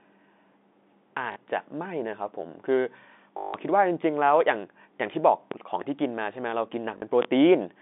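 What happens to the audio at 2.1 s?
Nothing goes wrong at 2.1 s: the speech there carries straight through the G.711 telephone coding, with its narrow line band of about 200 Hz to 3.6 kHz and at most a faint trace of coding noise.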